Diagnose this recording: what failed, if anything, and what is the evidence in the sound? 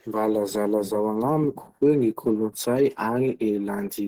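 The codec stage failed. The speech carries plainly audible artefacts of likely Opus compression throughout. The hoarse, muffled texture points to the encoder's hybrid speech mode at a low rate, consistent with 16 kbps, though the content still extends to about 20.2 kHz.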